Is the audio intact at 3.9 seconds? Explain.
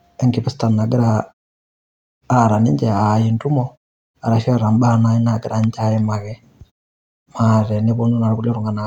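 Yes, the speech is intact at 3.9 seconds, with no fault at that moment.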